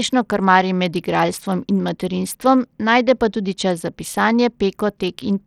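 Throughout the speech, treble flickers and drops out under gritty noise. Likely Bluetooth SBC compression, starving the top sub-bands of bits.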